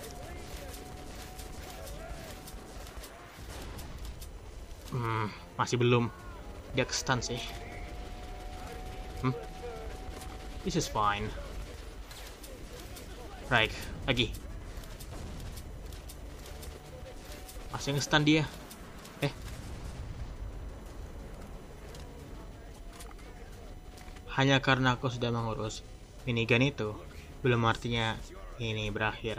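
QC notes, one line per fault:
Throughout: USB whine, a steady fixed-pitch tone at 1 kHz, strongest at its 3 kHz multiple, roughly 35 dB below the signal, from the bus's 1 ms frame current leaking through power or ground. A spectrogram shows thin unbroken horizontal lines at 1 kHz and 3 kHz.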